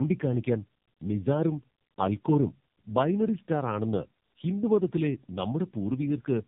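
From start to finish, the speech carries tandem speech coding. It sounds like two low-rate speech codecs in a row, something like G.729A handing off through a G.711 link into AMR-NB, with each one re-coding what the previous one already mangled. The errors stack, so the voice comes out rougher, more muffled and more warbly than a single codec would leave it. Everything above about 3.6 kHz is gone, which fits a narrowband phone path.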